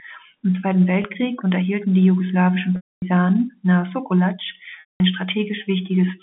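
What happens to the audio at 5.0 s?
At 5.0 s the sound returns from a packet loss with pitch repetition spanning 4.8 to 5.0 s, easing back in with a short cross-fade. The lost stretch opens with the last pitch period repeated as a buzzy hold that fades to silence within about 50 ms. A plain dropout, by contrast, would cut straight to silence.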